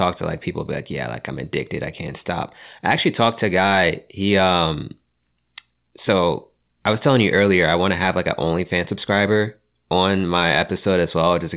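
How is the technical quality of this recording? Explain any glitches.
No glitches can be heard; the speech sits in a telephone-style band with nothing above 4 kHz, which fits a narrowband call codec such as G.711 mu-law at 64 kbps.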